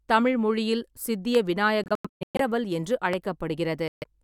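At 1.35 to 1.37 s there's a loud pop, a sharp click about 10 dB above the speech, with the talking carrying straight on underneath. It's likely a voltage spike from a switch, static or a driver glitch. Another identical pop lands at 3.13 to 3.15 s.

Between 1.84 and 2.41 s there's a Bluetooth dropout: the speech keeps cutting out, losing about 0.39 s in total across that stretch, with the longest hole about 116 ms. This is likely packets reaching the headphones too late to play. The speech resumes each time as though it had kept running underneath. A second, shorter dropout at 3.88 to 4.04 s silences about 140 ms.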